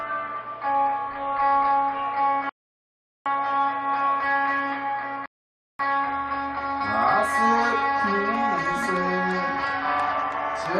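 At 2.49 s the audio drops to silence until 3.26 s, then again from 5.26 to 5.79 s. Both are rebuffering stalls: the player ran dry, waited for more data, then picked up exactly where it left off, adding about 0.76 s and 0.54 s.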